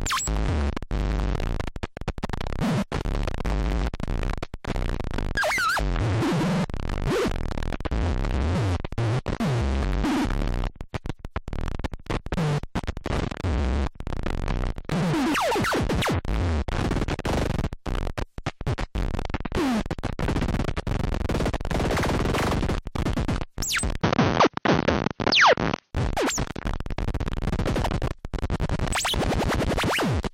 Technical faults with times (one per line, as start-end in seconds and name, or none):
24.01-25.93 input switched to a poorer device